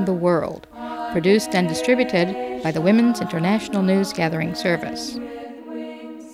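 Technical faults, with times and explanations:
No technical faults can be heard anywhere in the recording.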